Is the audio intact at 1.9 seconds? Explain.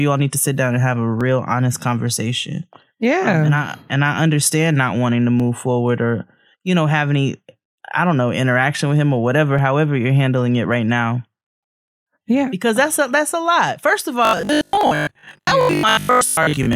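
No. At 1.9 seconds the audio sits inside a run of clock drift buffer slips from 1.21 to 13.78 s, beginning after "down and have a" and ending before "first of". Clicks or pops recur every 4.19 s, about four in all. The likely cause is two devices on independent clocks differing by roughly 150 ppm, so the buffer between them drifts until around 30 samples are dropped or repeated at each slip.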